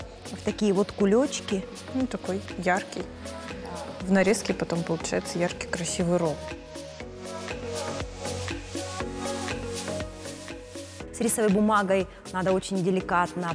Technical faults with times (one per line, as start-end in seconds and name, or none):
none